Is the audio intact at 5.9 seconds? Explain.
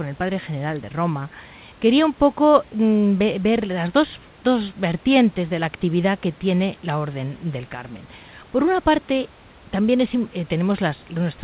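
Yes, the speech at 5.9 s is intact, with no dropout, glitch or other fault at that moment.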